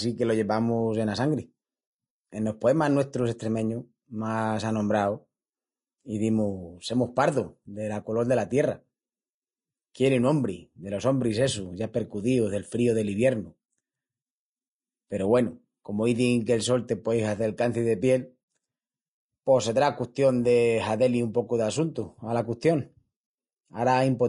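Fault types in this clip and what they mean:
Vorbis compression: The speech sounds hissy and grainy throughout, with roughened vowels and blurred consonant attacks. Nothing sounds above about 10.6 kHz. This is likely low-bitrate Vorbis coding, around 29 kbps, where coarse treble quantisation replaces fine detail with noise.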